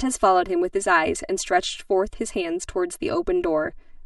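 Throughout the recording, one channel arrives roughly 3 ms behind the other, and when the pair is folded down to mono the shared speech partly cancels itself. That channel delay produces comb filtering: fixed notches starting around 150 Hz and recurring at regular intervals of roughly 330 Hz up the spectrum. The voice comes across hollow and phasey, as if heard through a tube, in a way that never changes.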